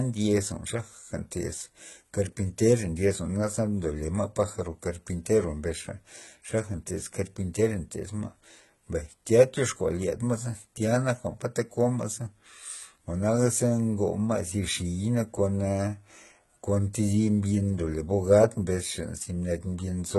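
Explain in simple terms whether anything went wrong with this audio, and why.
The speech was squeezed hard by what is likely HE-AAC compression, running the whole way through. To save space, this kind of codec keeps only the lower part of the sound and fakes the treble by copying lower bands upward, then shaping them roughly. That rebuilt top end doesn't match the real one, so s sounds come out gritty, metallic or lisping, and nothing at all survives above about 11.8 kHz.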